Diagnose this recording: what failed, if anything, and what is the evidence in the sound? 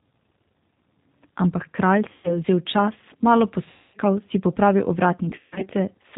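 G.729 codec, throughout: the codec stage. The whole clip carries plainly audible codec damage. The speech is intelligible but rough and slightly synthetic, and nothing above 4 kHz survives. This points to a G.729A stream at 8 kbit/s. The decoder rebuilds each 10 ms frame from a vocal-tract filter, a pitch predictor and a handful of pulses, so the speech comes out slightly rough and synthetic.

VoIP packet loss concealed by the speech codec, at 2.12–2.39 s, 3.70–3.97 s and 5.30–5.67 s: the network stage, with the codec covering the gaps. The first burst drops 120 ms of audio and the second 240 ms. The third loses 200 ms scattered over 320 ms, with its longest run at 120 ms. The gaps fit lost 20 ms packets. Each time, the decoder keeps extrapolating its last pitch and filter at falling gain, so the speech smears into a fading buzzy tone or coloured noise. Because each frame builds on the previous one, the speech stays weak or distorted for a moment after the packets resume.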